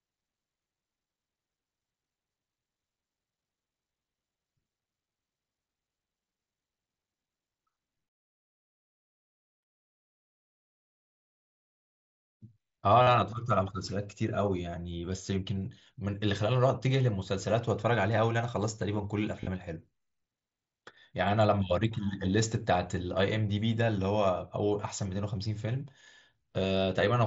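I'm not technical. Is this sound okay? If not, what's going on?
No. There is concealed Bluetooth headset packet loss at 13.02 to 13.07 s and again at 19.41 to 19.47 s. Bits of the speech travelling from the headset to the phone went missing. The phone filled each gap by repeating a short piece of the sound just before it, which gives a brief buzzy hold, about 45 ms in the first spot and scattered across about 60 ms in the second.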